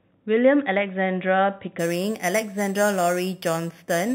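Imaging from sample-and-hold upsampling runs from 1.79 s to the end of the clip. The speech appears to have been raised from about 8 kHz to 44.1 kHz by holding each sample with no smoothing filter. Mirrored copies of the spectrum therefore fold above the original band, the first filling 4 kHz to 8 kHz at about 15 dB below the speech. It is heard as a bright metallic fizz that tracks the speech's loudness, its lowest copy moving against the pitch.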